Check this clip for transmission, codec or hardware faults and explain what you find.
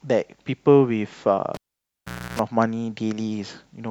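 One hardware fault stands out: a cable pulled and plugged in, from 1.54 s to 2.39 s in this speech clip. A live cable is yanked out, giving a sharp pop. The signal then drops to near silence for about 0.8 s. As the plug goes back in, only the tip touches first. That exposed contact picks up 60 Hz mains buzz for about 0.3 s. A second pop follows as full contact restores the speech.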